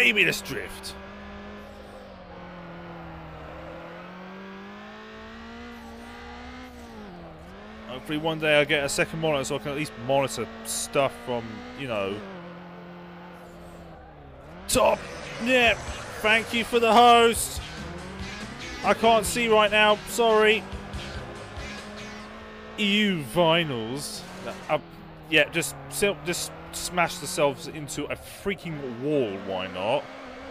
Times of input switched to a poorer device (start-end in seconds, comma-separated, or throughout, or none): none